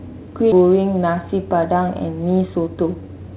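A skip ahead at 0.52 s makes the speech jump forward abruptly. Roughly seven tenths of a second of audio was discarded while later packets were already queued, and the two edges are butted together with no fill, so the sentence lurches past a missing stretch.

A jitter buffer speed-up runs from 2.47 to 3.09 s. With more audio buffered than its target, the receiver repeatedly cut out pitch-period-sized slices, about a tenth of a second in total. Over this span the speech runs at 113% pace with unchanged pitch and sounds hurried, all within the narrowband call path, which has nothing above 4 kHz.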